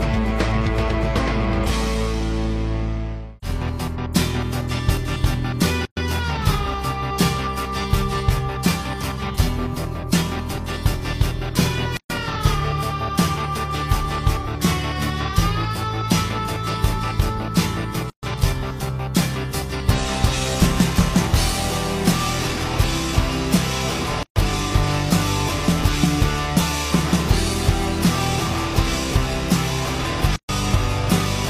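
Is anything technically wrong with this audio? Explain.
Yes. There are gaps at joins of encoded pieces at 5.85–5.97, 11.97–12.10, 18.10–18.23, 24.23–24.36 and 30.36–30.49 s, recurring every 6 s. Separately encoded segments were joined with each encoder's start-up delay and final-frame padding left in. This opens gaps of 117 ms, then 130 ms, with smeared edges, before the sound resumes where it stopped.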